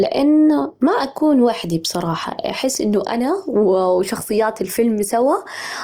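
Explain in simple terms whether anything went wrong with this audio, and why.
Opus compression, throughout the clip: the speech sounds rough and grainy, with a noisy fizz over it, though the treble stays present. This is likely the Opus codec squeezing the file hard and filling parts it lacked room for with noise-like sound.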